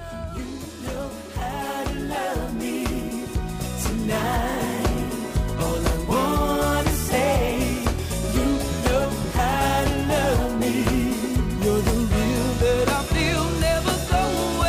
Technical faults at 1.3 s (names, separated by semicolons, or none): none